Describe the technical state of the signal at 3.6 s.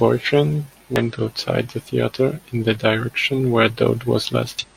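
At 3.6 s the signal is intact, with no audible fault at that point.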